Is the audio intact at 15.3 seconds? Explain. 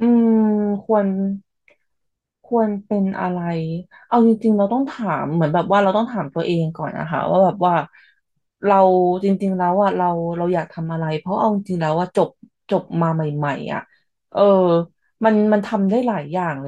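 Yes, the audio is intact at 15.3 seconds, with no audible fault at that moment.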